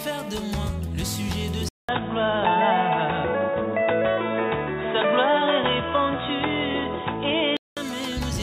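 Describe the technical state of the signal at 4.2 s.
At 4.2 s the sound is dull and boxy, inside a stretch from 1.69 s to 7.77 s. Nothing passes above 3.8 kHz. A 200 ms gap opens it. Level shifts by about 5 dB, with faint new noise. This is likely an input switched to a poorer device.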